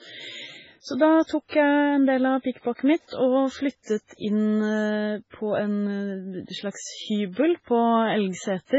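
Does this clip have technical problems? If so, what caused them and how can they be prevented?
Yes. MP3 compression damages the speech throughout, likely from a very low bitrate that fits about 16 kbps: nothing survives above 7.7 kHz, and weak frequency content flickering between frames leaves heavy watery, swirly artefacts. To prevent it, record or export losslessly, or encode at a much higher bitrate.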